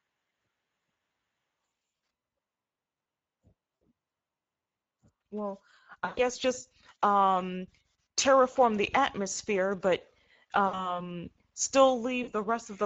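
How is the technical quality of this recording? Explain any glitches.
The speech is noticeably degraded throughout, with six brief dropouts.

Throughout, the voice sounds hoarse and grainy, with noisy fill above 4 kHz. This is Speex codec damage, which fits a bitrate around 16.8 kbps starving the excitation.

At 1.79–2.03, 3.76–3.83, 6.05–6.31, 8.51–8.57, 10.67–11.00 and 12.23–12.33 s, the speech smears into a fading buzz or coloured noise and stays weak briefly afterwards. This is VoIP packet loss concealed by the speech codec, where the decoder extends its last pitch and filter to cover roughly 40–120 ms of missing audio.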